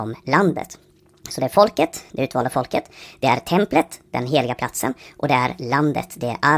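Throughout the speech, a wrong sample rate plays everything 1.45 times too fast and about 6.45 semitones too high, which fits audio recorded near 22 kHz being played at 32 kHz without conversion. Unlike a pitch shift or time-stretch, tempo and pitch rise together, giving a hurried, chipmunk-like sound.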